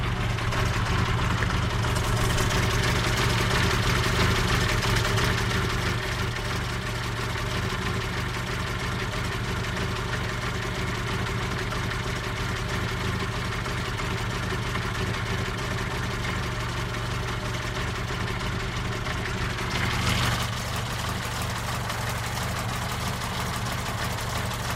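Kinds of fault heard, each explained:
No faults can be heard in this recording of sounds. Nothing in it points to a problem anywhere along its signal path.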